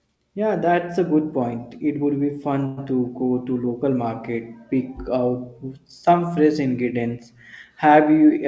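Packets most likely stalled on their way and the jitter buffer ran dry at 2.66 s, just after "would be", producing a call audio freeze that lasts until 2.79 s. The receiver covers the gap by stretching the last sound into a fading buzz or hiss for about 112 ms instead of dropping to silence. Playback then resumes from exactly where it stopped, so nothing is lost, but everything afterwards arrives about 112 ms late. The call codec's cut-off, with nothing above 8 kHz, applies throughout.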